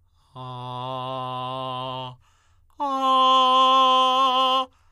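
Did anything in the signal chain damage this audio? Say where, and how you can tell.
No, nothing in the signal chain damaged this music, and there is nothing in it to place or point to.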